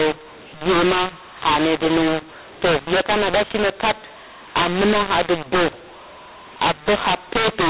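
From start to finish the speech sounds harsh and gritty, with levels thrown about unevenly and the gaps between phrases filled with a steady hiss instead of silence. The cause is mu-law and A-law mixed up: the narrowband telephone signal was coded with G.711 mu-law but decoded as A-law, so every sample's value is read on the wrong logarithmic curve, distorting loud parts and lifting the quietest samples well above zero.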